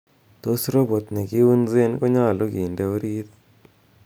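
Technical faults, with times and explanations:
No technical faults, so there are no times or explanations to give.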